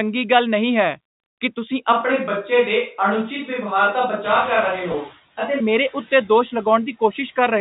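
Right from the start there are noise suppressor artifacts. The suppressor is pulling down the bands it reads as steady noise by about 12 dB, frame by frame, so the background dips between phrases and swells back under the speech.

Around 4 s the room noise jumps by about 19 dB. From 4.24 to 5.06 s you can hear the noise suppressor catching up. Its noise estimate trails the new level, so at first the noise gets only about 5 dB of reduction. It then settles down over roughly 820 ms as the estimate adapts.

Inside that stretch, from 4.92 to 4.94 s, there's packet loss with pitch repetition. About 20 ms of audio went missing, which fits two 10 ms packets. The receiver filled the hole by repeating the last pitch period, so you get a brief held, slightly buzzy tone before the speech picks up again. The band-limited G.711 telephone sound underneath is just the line format.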